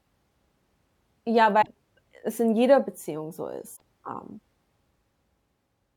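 At 1.58 to 1.68 s and again at 3.72 to 3.82 s, damaged data in a compressed stream breaks into the speech. Each time the decoder misreads corrupted frames and hunts for the next valid header, producing a brief glitch about 0.1 s long.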